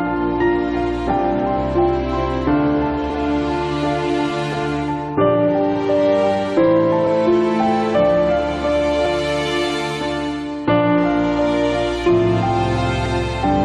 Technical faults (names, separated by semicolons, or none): overlap between stream segments